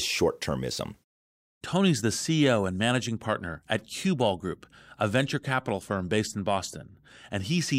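Listening through the speech recording, nothing stood out as a technical problem at any point.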